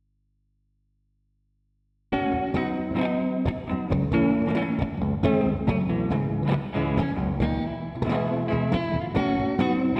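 From the first moment until 2.12 s the music is already missing, an audio dropout to a faint residue in which only a low mains hum sits, roughly 45 dB below the music's level. The likely cause is a broken connection upstream while the input stayed open, so the path kept carrying hum. The music then returns abruptly at full level rather than swelling up, which rules out a fade-in, and the audible hum separates it from a dead, silent gap.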